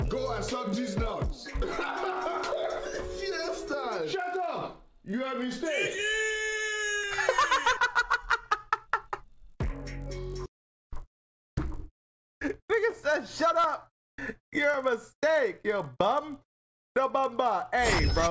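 Throughout the clip, a resampler restarted on every block produces a 50 Hz buzz. Each 20 ms block was converted separately, so every block edge carries a small error. Unlike mains hum at the same pitch, the buzz appears only with signal and stops during silence.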